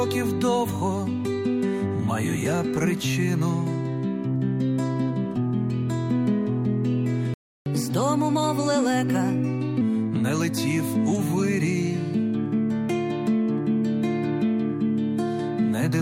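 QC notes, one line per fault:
7.34 to 7.66 s, playback stall: the sound just drops out mid-flow for about 0.32 s, a clean gap of silence rather than a fade, and then picks up again. That's the classic signature of the player running dry, likely because the buffer emptied or the playback thread got held up, so there was nothing to send to the output until data arrived and it could carry on.
7.66 to 9.81 s, catch-up at higher speed: straight after the gap everything runs fast, at 1.15 times normal speed, and pitch rises with it by about two semitones, so it sounds hurried and a touch chipmunky. The player is resampling its backlog to claw back the time lost in the stall, which shifts speed and pitch together. Once it's caught up, around 9.81 s, it settles back to normal rate and pitch.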